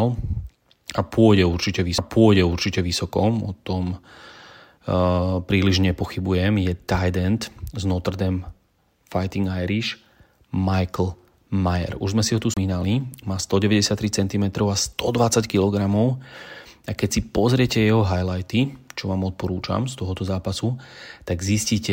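At 1.98 s the speech breaks with a CD skip: a very short mute and tick as the laser loses its track and lands on another turn of the spiral, so playback resumes from a different point. A second, longer CD skip runs from 12.54 to 12.57 s, muting for around 30 ms before the audio picks up elsewhere on the disc, heard as a click followed by an abrupt discontinuity in the speech.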